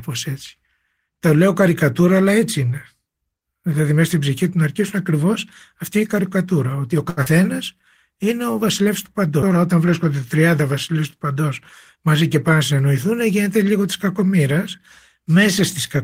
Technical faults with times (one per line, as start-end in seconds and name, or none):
7.09-7.20 short stall from a late packet
7.23-7.29 short concealed packet loss
7.42-7.85 jitter buffer slow-down
9.42 CD skip
11.95-12.82 jitter buffer speed-up